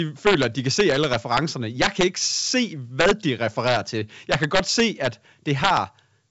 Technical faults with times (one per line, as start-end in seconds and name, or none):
0.27-0.45 integer overflow
0.80-1.38 integer overflow
1.82-2.04 integer overflow
3.00-3.11 integer overflow
3.67-3.77 integer overflow
4.32-5.07 integer overflow
5.64-5.77 integer overflow